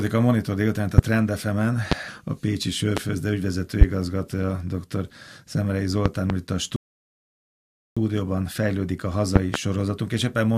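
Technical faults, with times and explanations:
0.98–1.02, 1.92–1.95, 2.97–3.00, 3.81–3.85, 6.06–6.33 and 9.36–9.57 s, loud pop: sharp pops land on top of the speech, single ones in the first four places and a close pair in each of the last two. They peak around 20 to 25 dB above the speech, which carries on underneath. The likely cause is a sudden voltage step or spike from a plug, switch, static discharge or driver glitch, which the following circuitry shapes into a brief pulse.
6.76–7.97 s, rebuffering stall: the speech drops to silence for about 1.2 s and then resumes exactly where it broke off, with nothing skipped. This is the player running out of downloaded audio and pausing until more arrives. No content is lost, but the pause adds 1.2 s to the running time.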